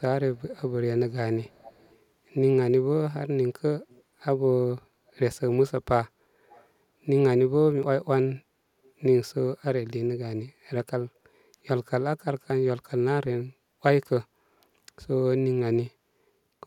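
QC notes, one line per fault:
0.38–0.56 s, 1.49–1.98 s, 3.89–4.03 s, 6.49–6.66 s and 8.85–8.9 s, echo leak: you get a faint copy of the speech trailing the original by 357 ms each time, in short scraps. The strongest is the 1.49–1.98 s stretch at about 25 dB down. The others sit lower, with the first one barely there. Likely a far-end speakerphone whose echo canceller let some of its mic pickup back into the call.
7.83 s and 12.5 s, dropped buffer (overrun): each is a point where the speech jumps forward with no gap. Roughly 20 ms of audio is missing each time. The likely cause is the capture side not reading its samples before the hardware overwrote them, so the audio on either side of the lost chunk got spliced together.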